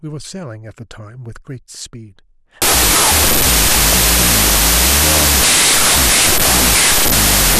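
From 2.62 s to the end, 32-bit float data read as 16-bit integers, a wrong sample width, turn the speech into loud noise, buried and half-speed.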